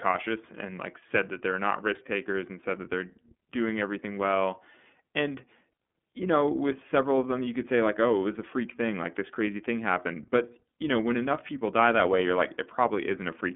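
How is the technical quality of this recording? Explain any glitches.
The technical quality is limited by codec damage that runs through the whole recording. The speech was passed through the iLBC codec, which codes each 30 ms frame on its own, at a rate that fits about 13 kbps. The line is cut to roughly 200 Hz to 3.5 kHz, with nothing above 3.8 kHz, so the speech sounds dull and plainly rough and synthetic.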